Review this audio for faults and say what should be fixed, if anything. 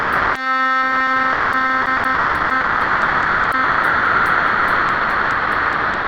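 Sound dropped by the voice detector cuts the music at 0.00–0.35, 1.33–1.53, 1.82–1.86, 1.97–2.04, 2.15–2.50, 2.61–3.52 and 3.64 s to the end, most likely Opus DTX treating music as background. On a spectrogram the harmonic detail gives way to flat, faint noise, and the waveform collapses to a thin band. Disabling DTX or voice detection for music would prevent it.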